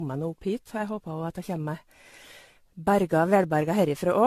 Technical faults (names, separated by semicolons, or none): generation loss